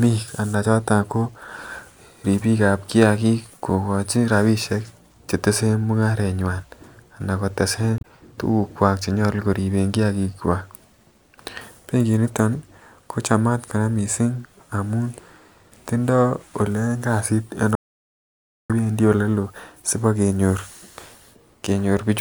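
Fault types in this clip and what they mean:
Damaged data in a compressed stream: Around 7.98 to 8.05 s there's a short glitch lasting roughly 64 ms. That's what you get when some of the compressed bytes are wrong or missing. The decoder can't make sense of those frames, loses its place, and spits out junk until it locks onto the next valid frame header and gets back on track.
Audio dropout to silence: From 17.75 to 18.70 s the speech cuts off abruptly and you get almost a full second, about 0.94 s, of dead digital silence. There's no room tone or hiss in the gap, and whatever was said in that stretch is simply gone. The likely cause is the input dropping out, through a device disconnect, a failed link or an accidental mute, while the recorder kept writing.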